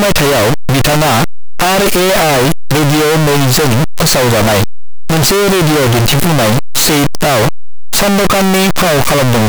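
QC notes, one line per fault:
Throughout, signed and unsigned mixed up: the speech sits in loud, harsh distortion and soft sounds are as loud as strong ones. This is likely from 8-bit samples read with the wrong sign convention, so each zero crossing jumps across the full range. Plain 8-bit rounding grain would stay quiet in pauses.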